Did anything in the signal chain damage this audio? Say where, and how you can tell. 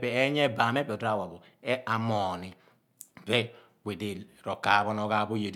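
No, nothing in the signal chain damaged this audio.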